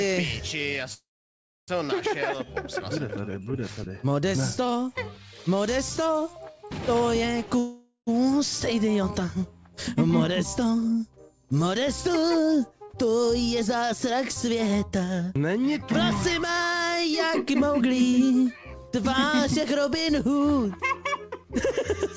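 Packets were likely held up, starving the jitter buffer. At 0.94–1.70 s and 7.59–8.09 s, call audio freezes insert a fading buzz, mostly silence the first time, then resume without loss.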